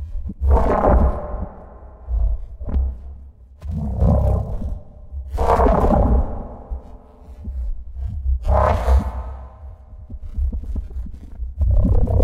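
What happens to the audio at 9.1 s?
Nothing goes wrong at 9.1 s; the sound carries on intact there, with no dropout, click or distortion.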